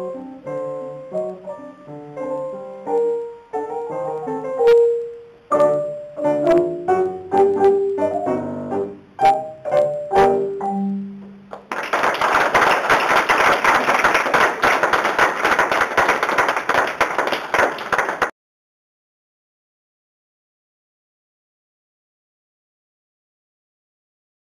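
No technical faults can be heard anywhere in this recording.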